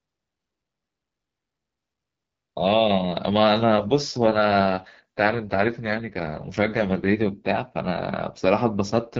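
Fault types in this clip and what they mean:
AMR rate drop: 3.85–7.38 s and 8.87–9.18 s, speech turns rough and synthetic with no gap or band loss, which fits a codec fallback from 12.65 to 6.6 kbit/s.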